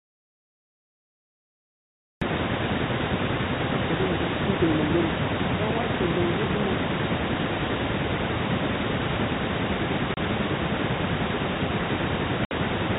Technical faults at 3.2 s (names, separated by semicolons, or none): none